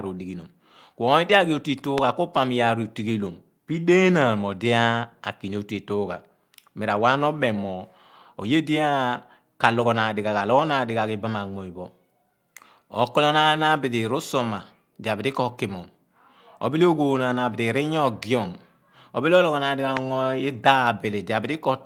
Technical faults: lost packet rebuilt from error correction; loud pop

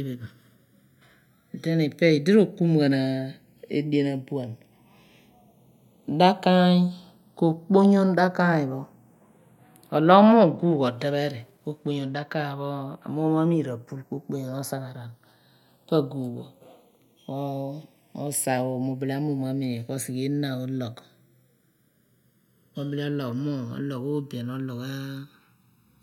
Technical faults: channels drifting apart

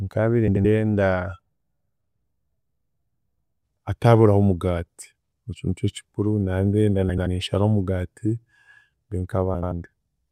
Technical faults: frames out of order

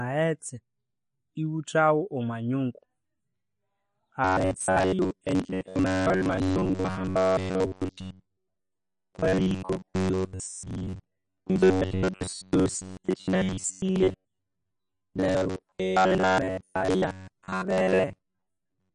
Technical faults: MP3 compression; robotic sound from repeated short buffers

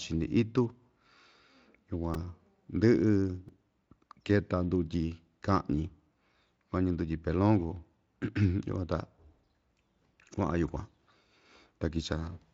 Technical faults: repeated buffer

